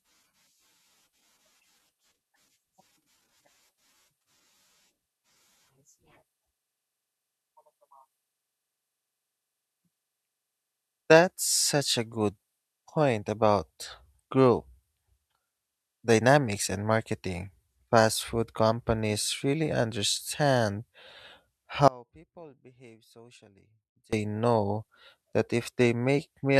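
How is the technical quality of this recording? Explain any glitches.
The recording has one clear glitch, an audio dropout to a faint residue from 21.88 to 24.13 s. The speech cuts out abruptly for about 2.2 s, leaving only faint sound roughly 30 dB down. The likely cause is a brief signal loss upstream while the path stayed live. The instant edges and that lingering residue set it apart from a natural pause or fade.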